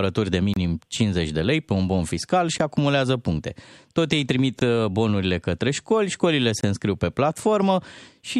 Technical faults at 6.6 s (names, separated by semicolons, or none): gap between stream segments